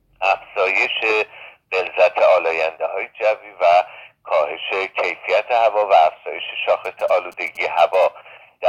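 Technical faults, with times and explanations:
6.85 to 8.04 s, GSM signalling bursts: a nearby 2G phone is signalling. The circuit rectifies its radio bursts into galloping ticks and 217 Hz buzzes, about 30 dB below the sound.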